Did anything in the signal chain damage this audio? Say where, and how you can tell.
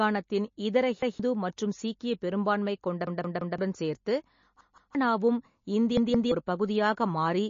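Yes, two stages left marks.

The codec stage is the likely source of the first problem. The whole clip of speech has a watery, swirling quality, plainly audible, and nothing is present above about 7.2 kHz. That points to MP3 compression at a low bitrate, around 32 kbps, where weak frequency lines flicker in and out between frames and the treble is cut off at a fixed point. It differs from a simple low-pass filter because the damage also moves and chirps within the band, not just at the top.

The driver or buffer stage produced a repeated buffer fault four times. At 1.02 to 1.20 s one piece about 0.17 s long plays twice. At 3.07 to 3.58 s, right after "சீக்கிய பெரும்பான்மை கொண்ட", a piece plays four times. At 4.61 to 4.95 s and 5.97 to 6.32 s pieces play three times. Each repeat is identical and meets the next at a hard join, and the piece length fits an 8192-sample buffer. New audio arrived late, so the last buffer was replayed, and roughly 150 to 500 ms of speech was lost at each event. 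This is not a dropout, which would leave a gap, and not codec smearing: the same fragment audibly stutters.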